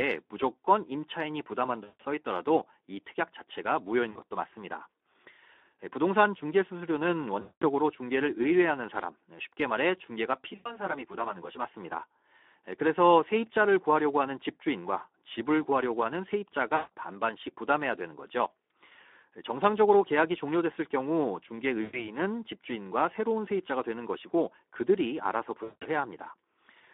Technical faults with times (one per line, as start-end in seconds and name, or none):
0.00-26.94 Speex codec
1.84-2.02 VoIP packet loss concealed by the speech codec
4.11-4.22 VoIP packet loss concealed by the speech codec
7.41-7.67 VoIP packet loss concealed by the speech codec
10.36-11.65 channel delay (comb filtering)
10.55-10.76 VoIP packet loss concealed by the speech codec
16.75-16.91 VoIP packet loss concealed by the speech codec
21.81-22.11 VoIP packet loss concealed by the speech codec
25.63-25.86 VoIP packet loss concealed by the speech codec